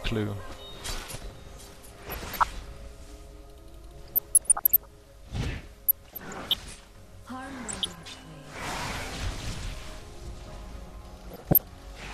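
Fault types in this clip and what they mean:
MP2 compression: Dull, gurgling, granular sound throughout, with upper bands flickering out, likely from MPEG Layer II coding at a bitrate of about 80 kbps; steady, not bursty.
DAB burbling: Short bursts of noisy blips, unlike the steady coding dullness, as received bit errors put short blips of noise in single sub-bands, around 1.9, 4.1, 5.9, 7.7 and 11.3 s.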